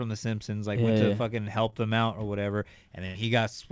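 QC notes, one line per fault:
1.70–1.74 s, short concealed packet loss: about 20 ms of the call arrived too late for the decoder, just after "like went to fucking", so the receiver extended the preceding sound for about 22 ms and crossfaded back, leaving a brief smear before "them out or whatever".
3.06–3.23 s, burst of packet loss: roughly 80 ms of consecutive audio never arrived after "them out or whatever". The receiver stretched the last sound for about 86 ms while fading it, then resumed with about 9 ms skipped. Above 8 kHz there is nothing, which fits a wideband call codec.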